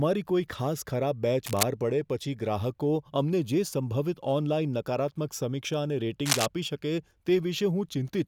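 Cable scratch noise appears from 1.46 to 1.64 s, after "કોઈ ખાસ ખરાબ બેચ" and before "પડે પછી ગ્રાહકો અમને", and again from 6.26 to 6.47 s. Dense, ragged scratching roughly as loud as the speech rides over it, likely from a worn cable or connector shifting and making unstable contact.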